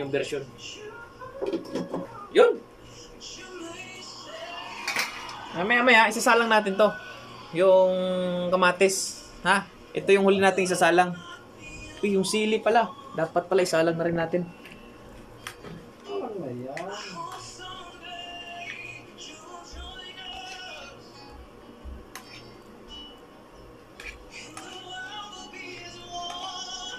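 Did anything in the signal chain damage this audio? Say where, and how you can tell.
Yes: DAB burbling at the codec stage, at 3.90–4.21, 14.08–14.69, 20.01–20.37 and 24.60–24.75 s. Bit errors from weak reception corrupt MP2 sub-band samples and scale factors. On a spectrogram, single bands flicker block by block, and the sound carries short noise blips and sub-band level jumps.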